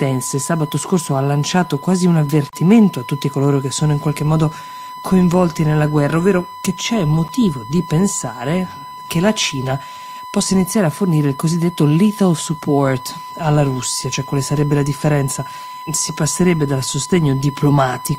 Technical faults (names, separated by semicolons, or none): USB whine; block of digital silence